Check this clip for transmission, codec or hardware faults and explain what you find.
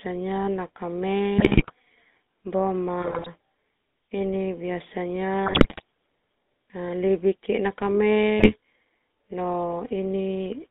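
Two faults are present, both from a GSM link.

The GSM full-rate codec affects the whole clip. The speech is band-limited to 200 Hz to 3.6 kHz. The coder rebuilds the voice from a vocal-tract model driven by sparse regular pulses, which fits a 13 kbps full-rate coder. The damage is plainly audible as a buzzy, gravelly roughness throughout.

GSM bit errors occur four times: 1.38 to 1.73 s, 3.00 to 3.28 s, 5.46 to 5.82 s and 8.39 to 8.52 s. Corrupted filter, pitch and gain values reach the decoder. Frames warp or jump in level. The speech squawks, pops and gargles. The third burst sounds heaviest.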